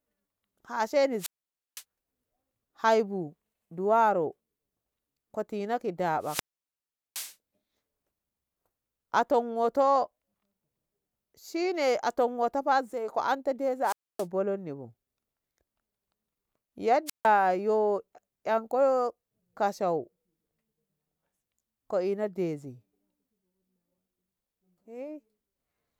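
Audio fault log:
1.18–1.84 s, 6.20–7.36 s, 13.83–14.26 s, 17.06–17.27 s: wireless microphone squelch dropout. Each starts with a short rise of hiss and static, then the speech falls into near silence for about 0.51 s, 0.76 s, 0.27 s and 0.15 s, then returns. The analogue FM radio link fades, the receiver's noise climbs, and its squelch shuts the output until the signal is strong enough again.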